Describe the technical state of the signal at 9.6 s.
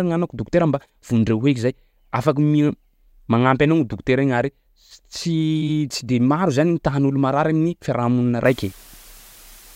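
At 9.6 s the speech carries low bit depth with dither, from 8.45 s after "tahan'olo marary amin'ny fiarahamonina" to the end. Seven-bit rounding with dither leaves a steady, even hiss about 25 dB below the voice.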